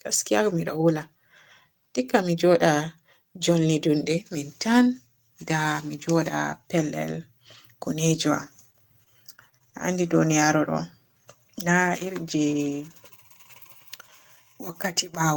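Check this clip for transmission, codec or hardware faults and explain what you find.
Two transmission faults affect this speech. Lost packets rebuilt from error correction occur at 7.11, 7.54, 7.84 and 8.14 s. Each 20 ms packet was replaced by a low-bitrate copy, so there is no gap, only a brief rough, noisier patch.

Repeated packet loss from 8.70 to 9.82 s leaves six gaps, the longest 36 ms. Unlike the rebuilt packets, this sounds choppy, with pieces missing.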